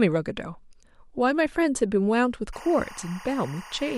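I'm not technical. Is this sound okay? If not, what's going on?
No. From 2.53 s to the end, timecode bleed adds a chirping warble. It is a sync signal, likely from a nearby cable, leaking in behind the speech.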